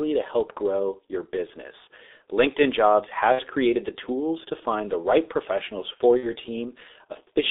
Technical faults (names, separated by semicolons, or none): G.723.1 codec; VoIP packet loss concealed by the speech codec